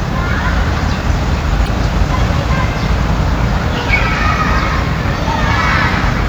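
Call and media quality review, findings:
Brief glitches at 1.64–1.68 s and 3.86–3.90 s, each about 40 ms. Damaged data in a compressed stream: corrupted bytes make the decoder misread frames there, lose sync and hunt for the next valid frame header before clean audio resumes.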